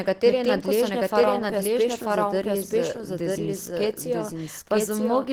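From the first moment to the end, the speech runs twice. A second full-band copy trails the original by about a second, at roughly the same loudness. It carries no decay or room colour, so the two lines of speech simply talk over each other. This is a doubled audio track. The likely cause is a second capture path or an edit that layered two copies out of step.

Across the whole clip, the sound is also grainy and hoarse. The content reaches up to about 20.2 kHz, so the bandwidth is not narrowed. Yet the damage is plainly audible. Voiced sounds turn rough and muffled, with a noisy texture in the upper bands. That character fits Opus compression in its hybrid speech mode. A low bitrate near 16 kbps is the likely cause.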